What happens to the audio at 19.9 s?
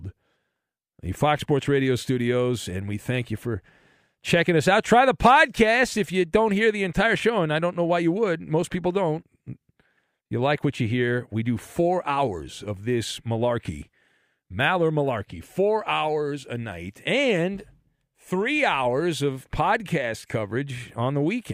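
Nothing goes wrong at 19.9 s; the speech plays through that moment intact, with no dropout, click or distortion.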